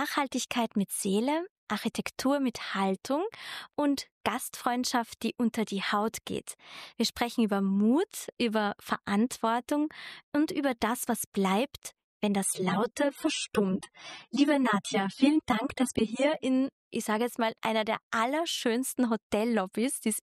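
Adaptive stream at a lower bitrate, from 12.45 s to 16.45 s: for about four seconds the player switched to a leaner version of the stream, as it does when the connection slows, then switched back. The quality change is abrupt with no gap. Everything above 13 kHz vanishes, leaving the top end dull, and coding artefacts become more noticeable. The sound points to a drop from about 96 to 24 kbit/s AAC.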